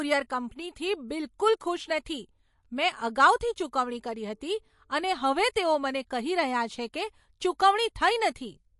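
Throughout, the speech sounds watery and swirly, with sibilants turning metallic and nothing above 11.3 kHz. This is likely MP3 compression at a low bitrate, around 48 kbps: starved of bits, the encoder cuts the treble and lets weak frequency lines flicker on and off between frames.

From 3.36 to 3.41 s, just after "બિલકુલ ખુશ નથી મેં", a short hiss runs for about 44 ms ahead of an attack, which then lands soft and smeared. This pre-echo happens because the codec spreads the noise meant for the loud onset across its whole block, including the quiet stretch before it.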